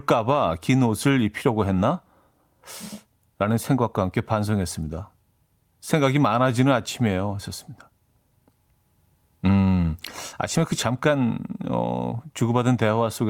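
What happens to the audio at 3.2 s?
Nothing goes wrong at 3.2 s; the speech plays through that moment intact, with no dropout, click or distortion.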